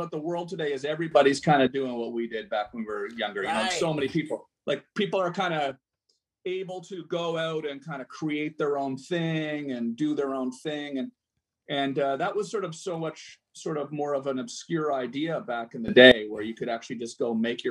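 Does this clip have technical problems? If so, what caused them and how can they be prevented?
Yes. A digital gain stage likely changed value from one sample to the next, with no ramp, producing three sudden gain jumps. Level and background noise leap together: up about 12 dB from 1.12 to 1.67 s, down about 6 dB from 5.71 to 7.11 s, and up about 18 dB from 15.88 to 16.12 s, each snapping back abruptly at the end. Smoothing every gain change over a few milliseconds would prevent these jumps and any clicks at their edges.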